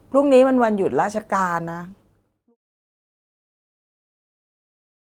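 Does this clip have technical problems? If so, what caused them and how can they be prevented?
No, there's nothing here that needs fixing, so there's nothing to prevent either.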